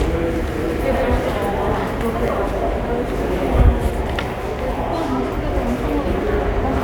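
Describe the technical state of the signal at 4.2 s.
At 4.2 s the audio is intact, with no audible fault at that moment.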